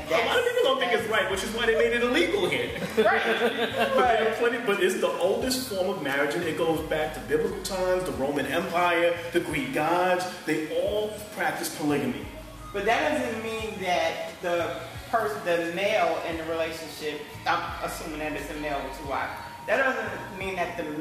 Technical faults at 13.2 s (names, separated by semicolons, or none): none